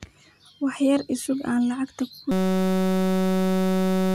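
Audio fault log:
2.32–4.15 s system hang loop: a steady 188 Hz buzz replaces the speech as a frozen driver lets hardware replay one 5.33 ms buffer, which fits 256 samples.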